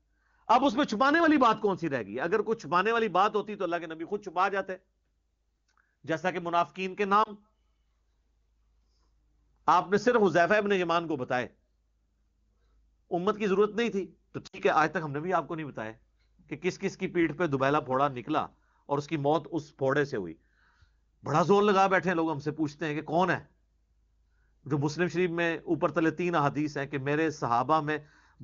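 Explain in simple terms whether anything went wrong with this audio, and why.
Radio errors spoiled small pieces of the call, causing lost AMR speech frames. The wideband decoder filled each gap by repeating the last good sound at lower volume. This gives a brief dip at 7.23–7.30 s and a longer gap that drops to near silence at 14.47–14.58 s.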